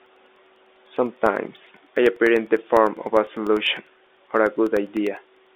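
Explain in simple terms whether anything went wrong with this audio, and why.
Periodic USB or driver dropouts run from 0.06 s to 5.47 s: every 0.1 s, about half a millisecond of speech vanishes into silence, some fifty times. Something keeps briefly stalling the audio connection, so you hear steady ticks through the telephone-style sound.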